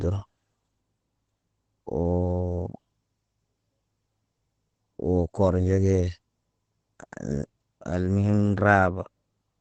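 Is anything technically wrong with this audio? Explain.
Yes. Throughout the speech there is heavy Opus compression damage: nothing remains above 8.4 kHz, and the voice sounds muffled and hoarse. That points to Opus likely running in its SILK speech mode at wideband, which fits a low rate of around 12 kbps.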